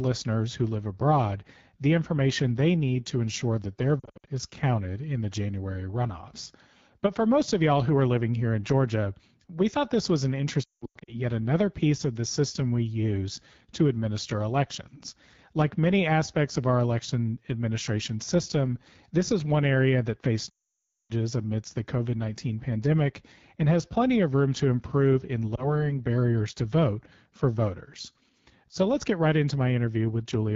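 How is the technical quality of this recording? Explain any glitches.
The recording has clearly degraded speech throughout, with four dropouts from lost frames.

The AMR wideband (HD Voice) codec runs at 8.85 kbit/s for the whole clip. At this low rate the pulse-excited vocal tract model lacks bits, so speech sounds rough and raspy, and the top band above 6.4 kHz is only shaped noise.

Lost AMR speech frames occur at four points:
4.00–4.29 s: 200 ms lost, scattered over 280 ms.
10.63–11.15 s, between "thought this was an" and "yet another piece of": 340 ms lost, with runs up to 180 ms.
20.5–21.12 s, after "one area that faced" and before "amidst the": 600 ms lost.
25.55 s, between "room to improve in" and "barriers to vote for": one 20 ms frame.

The decoder repeats the last good parameters at falling gain. The longer runs drop to near silence within two frames, and the single frame causes a brief warble.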